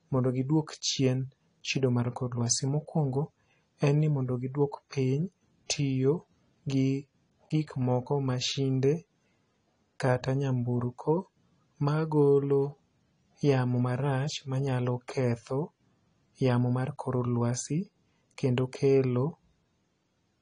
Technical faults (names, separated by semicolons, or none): AAC compression